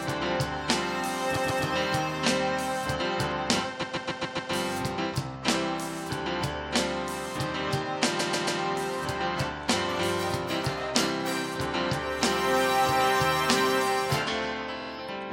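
Repeated frames make the sound stutter at 1.36, 3.82, 8.19 and 14.80 s. Blocks of 139 ms, and 46 ms at the end, replay two to five times.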